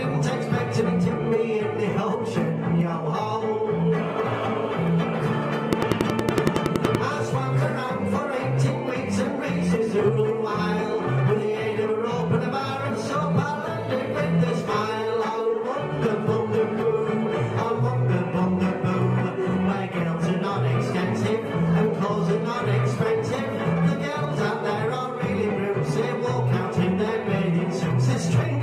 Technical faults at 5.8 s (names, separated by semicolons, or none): train of clicks